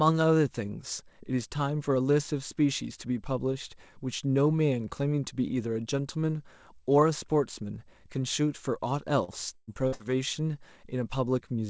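Speech, passed through a call link whose band stops at 8 kHz, consistent with G.722 at 64 kbps. From 9.24 to 10.05 s, repeated packet loss (robotic sound) leaves about four holes, the longest 113 ms, patched by stretching earlier sound. The spectrogram shows smeared, repeated bands and breaks, and the waveform shows choppy, looped segments.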